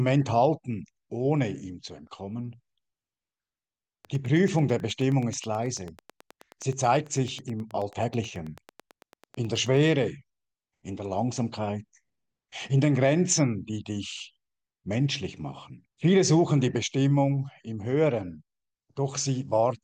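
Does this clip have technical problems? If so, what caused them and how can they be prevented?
Yes. A regular train of clicks, about nine per second and roughly fifty in all, ticks from 4.05 to 9.89 s, peaking about as loud as the sound itself. On a spectrogram these appear as evenly spaced thin vertical broadband lines, and on the waveform as sharp spikes. The likely cause is interference from nearby equipment or a faulty connection or power supply. To prevent it, keep cables and interfaces away from noisy devices and use a stable, properly powered interface.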